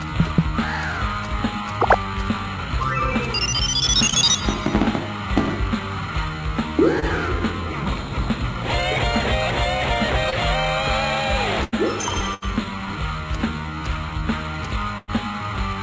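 Short concealed packet loss at 4.10, 7.00 and 10.30 s: each time about 20 ms of audio arrived too late, and the receiver extended the preceding sound to fill it, leaving a brief smear or wobble. Burst of packet loss at 11.64, 12.34 and 14.98 s: runs of 80, 80 and 100 ms went missing, heard as the last sound held and fading before the audio resumes further on. All of this passes through a call path with nothing above 8 kHz, which fits the G.722 codec.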